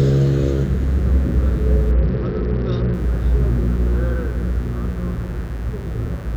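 A recording of everyday sounds carries a steady, raspy mains buzz from start to finish, sitting about 25 dB below the wanted sound. Sharp switching spikes arrive twice per 50 Hz cycle, so a spectrogram shows a ladder of harmonics on 50 Hz multiples climbing into several kHz, and the waveform shows small, regular spikes every 10 ms. From 1.91 to 2.94 s a Bluetooth SBC bit pool drop dulls the treble and adds gritty noise. On a spectrogram the upper bands thin out or go empty and the rest looks coarse and blotchy. This fits the bit pool falling from 31 to about 8, near 66 kbps, on a congested link.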